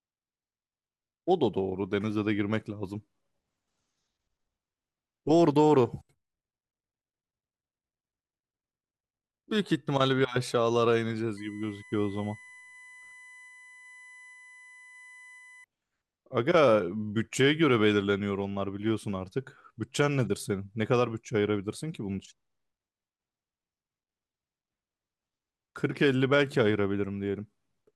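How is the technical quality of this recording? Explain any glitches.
The recording carries one glitch, a USB whine from 11.37 to 15.64 s. Current drawn by the USB bus in its 1 ms frames leaks into the audio through shared power or ground, so the frame rate turns into a steady tone. Here that tone sits on a 1 kHz fundamental, with its strongest component at the 2 kHz harmonic, roughly 25 dB below the speech. It is heard as a thin, fixed-pitch whine running under the voice for about four seconds.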